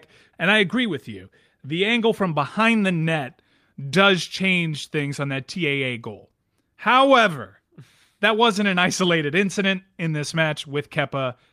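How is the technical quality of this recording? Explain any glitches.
No glitches, dropouts or level problems turn up anywhere in this speech recording, so there is nothing to explain.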